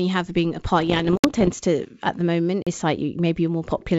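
From about 0.80 to 1.50 s the speech picks up bit errors on an ADPCM link, around one percent of bits flipped. Each flip knocks the decoder's step size and predictor off, so you get pops and rough, ringing bursts with brief jumps in level.

Inside that stretch, 1.17 to 1.24 s drops into a 64 ms block of digital silence, cutting out and back with no fade. A second hole, about 43 ms, hits at 2.62 to 2.67 s, which fits a 2048-sample buffer missing its deadline. The G.722 wideband sound around them comes through cleanly.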